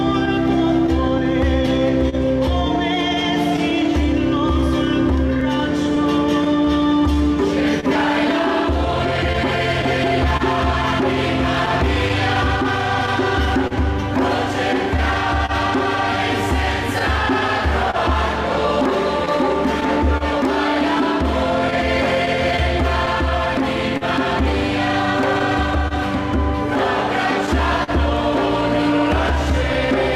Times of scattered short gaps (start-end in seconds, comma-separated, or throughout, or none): 0.25-27.91